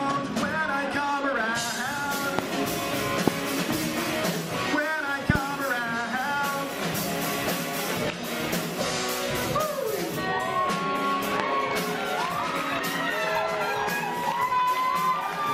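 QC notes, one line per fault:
2.39–2.41 s, 3.28–3.30 s, 5.30–5.38 s and 11.40–11.42 s, loud pop: a voltage pulse, likely from a switch, plug contact or static, enters the signal path and peaks about 20 dB over the programme. Each is heard as a sharp single pop, doubled at 5.30 s, with the sound continuing underneath.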